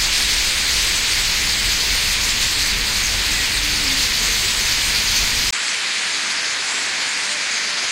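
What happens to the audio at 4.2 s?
Nothing goes wrong at 4.2 s: the sound carries on intact through that moment, with no dropout, click or other fault.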